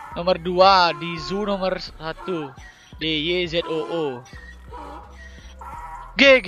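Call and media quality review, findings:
Short chirp-like burst at 3.00–3.03 s, peaking near -15 dBFS. Corrupt frame decoded: damaged bits in about two consecutive codec frames misplaced energy across frequencies.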